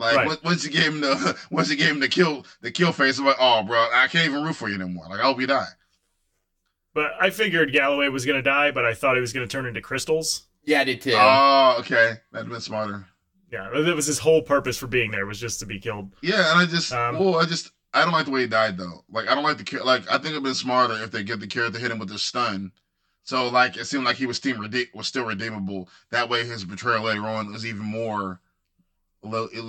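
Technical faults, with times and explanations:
Throughout: channel delay (comb filtering). One channel arrives roughly 10 ms behind the other, and when the two are summed to mono the shared speech content cancels wherever the delayed copy lands half a cycle out of phase. That produces fixed notches starting near 50 Hz and repeating about every 100 Hz up the spectrum, so the speech takes on a hollow, phasey colouration that stays constant for the whole clip.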